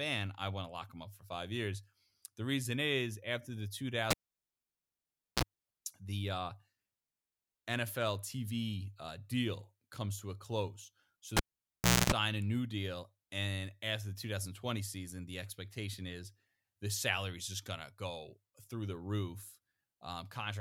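At 4.11 s the speech cuts out with a pop, and that's a cable pulled and plugged in on a live line. It goes nearly silent for about 1.28 s, then there's a brief 60 Hz mains buzz, around 40 ms, as the plug tip makes contact, and another pop when the signal returns. The same thing happens at 11.37 s, with a shorter 0.71 s dropout and a longer 0.26 s buzz before it pops back.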